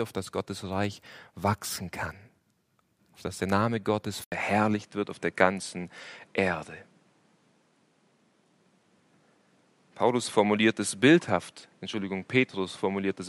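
At 4.24 s the sound drops out for 80 ms, then returns duller, with nothing above 11.3 kHz, a different tone and a faint new background noise well below it, at much the same level. The likely cause is the input switched to a poorer device.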